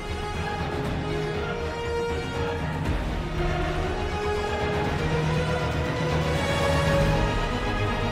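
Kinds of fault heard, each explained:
Doubled audio track: from 3.38 s to the end, a full-band second copy of the sound trails about 150 ms behind, at roughly the same level. It likely comes from a second, slower capture path. Unlike echo or reverb, the copy arrives abruptly, with no decay or room colour.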